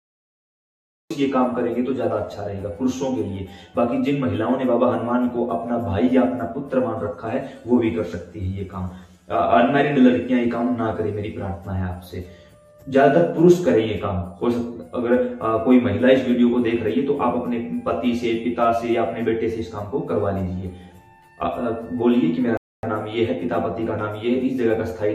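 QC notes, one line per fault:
throughout: channel delay (comb filtering). One channel runs roughly 10 ms behind the other, and summing to mono cancels shared content at evenly spaced frequencies, the first notch near 40 Hz. The result is a hollow, phasey colouration with fixed spectral notches across the clip.
0.00–1.11 s: cut-off start. The clip opens on digital silence, then the audio appears abruptly at 1.11 s already mid-sound, with no natural attack or fade-in. Capture or streaming evidently began late, truncating whatever was sounding at that moment.
22.57–22.83 s: rebuffering stall. Playback drops to silence for about 260 ms, then resumes exactly where it stopped with no content missing. The player ran out of downloaded audio and waited for more data, so time was added, not material lost.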